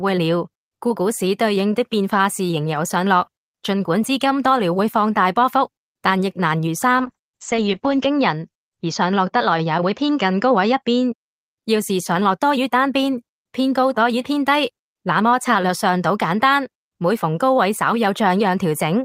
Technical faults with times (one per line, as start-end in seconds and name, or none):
7.01-11.23 call bitrate drop